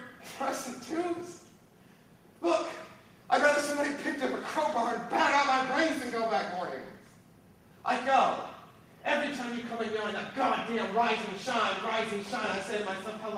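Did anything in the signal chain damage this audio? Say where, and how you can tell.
No, nothing in the signal chain damaged this audio.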